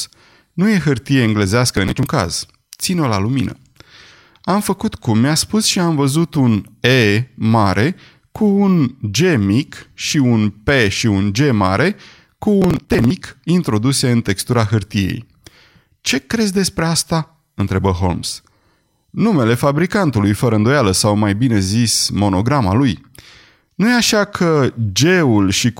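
A speech recording with two bursts of processor overload crackle, at 1.68 to 2.06 s and again at 12.62 to 13.10 s. Each burst sounds like gritty tearing over the voice. The processor is failing to finish its audio buffers in time. Missed ones are skipped, leaving many tiny hard-edged gaps in quick succession. The grain fits buffers of around 10 ms. The second burst is longer, pointing to more missed deadlines in a row.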